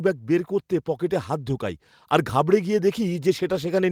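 From about 0.26 s through to the end of the clip, the level climbs steadily: automatic gain rising. The automatic gain control judged the incoming speech too quiet and kept stepping its gain upward rather than settling, so the whole signal swells over roughly 3.7 s. Because the gain acts on everything at once, the background noise floor rises in step with the voice, and the room gets audibly louder alongside the talker.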